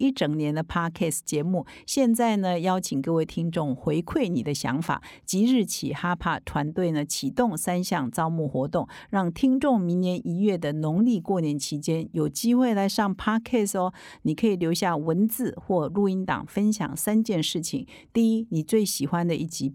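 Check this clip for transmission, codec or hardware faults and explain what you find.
Nothing stood out on listening to the speech in this recording, and no audible problem turned up at any point.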